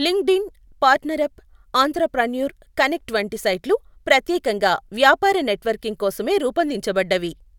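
No technical faults can be heard in this speech recording. No moment in the audio stands out as going wrong.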